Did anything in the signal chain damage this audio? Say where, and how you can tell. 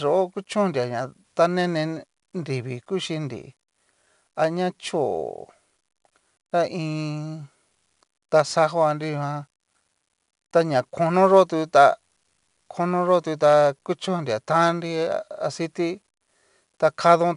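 Yes, at the codec stage: it's 4-bit ADPCM compression across the whole speech clip. Each sample is coded as a coarse step from a prediction, so a gritty hiss rides on every loud syllable, and nothing comes through above 10.7 kHz, which fits a rate of about 88 kbps.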